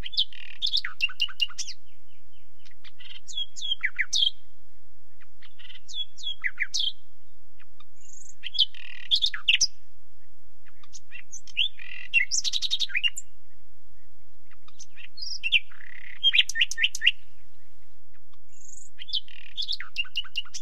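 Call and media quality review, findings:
No technical faults were found in this recording of sounds.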